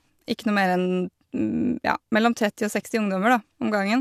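No technical faults can be heard anywhere in this short speech recording.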